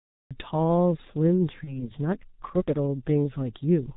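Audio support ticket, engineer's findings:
G.723.1 codec, whole clip. Speech muffled and hoarse, nothing above 4 kHz, consonants smeared. Heavy damage, consistent with the 6.3 kbit/s mode and its 30 ms frames and slow voice-model updates. Unlike plain band-limiting, the hoarseness and blurred transients come from coarse parametric coding, not just a low-pass filter.

Cut-off start, 0.00 to 0.31 s. Digital silence, then sound begins abruptly mid-event at 0.31 s. No attack, no fade-in. Capture or stream started late. Not a dropout: digital silence before any audio, and nothing missing later at this point.

VoIP packet loss concealed by the speech codec, 1.64 to 1.91 s. Sound stretches into a buzzy tone or coloured noise that fades, then stays weak and distorted well past the gap. This fits a single lost 30 ms frame: the decoder extrapolated the previous pitch and filter with falling gain, and the error carried through the following frames. 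Unlike a hard dropout, there is no silence, and the damage lasts about 0.26 s, much longer than the loss itself.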